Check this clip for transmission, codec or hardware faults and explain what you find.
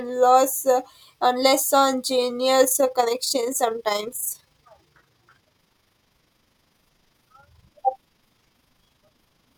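One fault is present, an overlap-add ripple. It starts at 2.64 s and continues to the end of the speech. The audio was split into windowed frames and rebuilt with an overlap whose windows do not add up to a steady gain. The level therefore swells and dips once per frame, by about 6 dB, at a rate of around 30 Hz. It sounds like a fast flutter laid over the speech, a rough tremolo.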